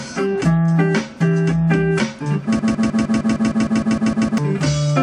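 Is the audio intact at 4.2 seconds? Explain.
No. A broken-record loop spans 2.59 to 4.38 s, so 4.2 s sits inside it: one 0.15 s fragment repeats exactly, back to back, 12 times. A stalled player or stream likely kept resending its last fragment, losing the intended audio.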